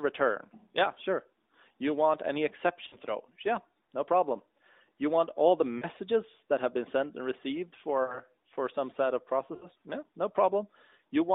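Brief dips with a smeared, fading warble come after "want any" at 2.88–2.97 s, after "you want all the" at 5.78–5.85 s, between "been sent and received" and "for some set of" at 8.04–8.19 s, and at 9.56–9.68 s. These are lost AMR speech frames. About 40 ms, or 60 ms in the last case, failed decoding, so the narrowband decoder stretched the previous pitch and spectral shape with decaying gain.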